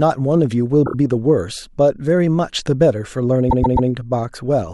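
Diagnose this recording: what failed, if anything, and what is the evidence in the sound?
Repeated frames, a codec stream fault. A 26 ms block stutters three extra times at 0.85–0.94 s. A 131 ms block replays thrice at 3.49–3.88 s.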